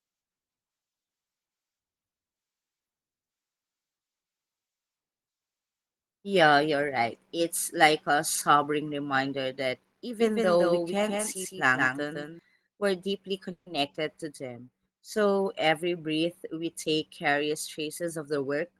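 A doubled audio track runs from 10.19 to 12.39 s. A second full-band copy of the speech sits roughly 150 ms behind the original and about 5 dB quieter, most likely picked up again through a slower path and mixed back in. The lagging copy carries no reverberant tail or room colouring, so it sounds like a hard slapback rather than an echo. It cuts in and out abruptly at both ends of the stretch.

A call audio freeze occurs at 13.51 to 13.68 s. For about 150 ms the speech stops advancing and the last sound is stretched into a fading buzz or hiss, likely because delayed packets left the jitter buffer empty. When the packets arrive, the speech picks up exactly where it paused. Nothing is lost. The result is an inserted hold of about 150 ms, and everything after it plays that much later.

A jitter buffer speed-up runs from 15.82 to 18.59 s. The receiver, holding more audio than it needed, trimmed many short pitch-period slices in quick succession to shed roughly 150 ms of built-up delay. 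The speech plays at about 105% of normal speed while its pitch stays unchanged. The pacing sounds slightly rushed and compressed through the final seconds of the clip.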